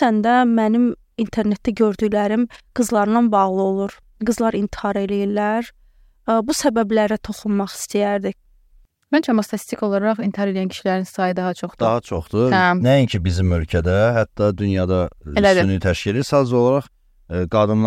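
No faults are audible anywhere in the recording: no dropouts, clicks, distortion or timing errors.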